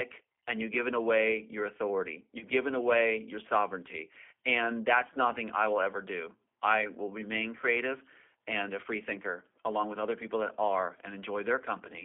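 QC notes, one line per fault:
Throughout, G.729 codec: the audio sounds narrow, slightly rough and synthetic, held within about 250 Hz to 3.4 kHz. An 8 kbit/s codec rebuilds each 10 ms frame from a vocal-tract filter, pitch predictor and a few pulses, leaving plainly audible coarseness.
2.39–2.45 s, VoIP packet loss concealed by the speech codec: just after "given away your authority", the sound briefly smears into a buzzy tone or coloured noise that fades before "given away your sovereignty". About 20 ms went missing, which fits a single lost packet. The decoder extrapolated its last pitch and filter, and the effect lingers until the sound recovers.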